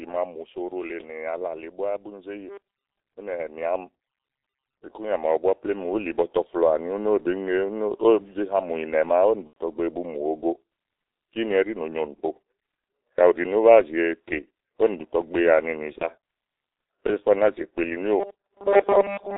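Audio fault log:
Throughout: G.723.1 codec. The sound is confined to roughly 300 Hz to 3.7 kHz, so it is muffled. Heavy coding damage makes it hoarse and smears consonants. This fits a 6.3 kbit/s codec whose voice model updates only every 30 ms frame.
9.47 to 9.54 s and 15.98 to 16.08 s: VoIP packet loss concealed by the speech codec. Each gap is stretched out and fades as the decoder repeats its last pitch and filter. The first falls just before "bu mu" and fits three lost frames. The second fits one.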